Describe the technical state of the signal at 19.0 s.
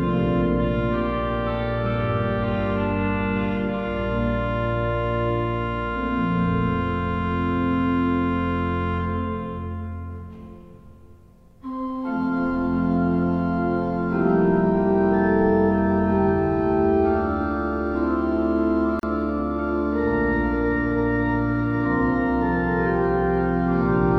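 A brief silence of about 36 ms cuts into the continuous sound from 18.99 to 19.03 s, with smeared edges, before resuming where it stopped: a gap at a join of encoded pieces.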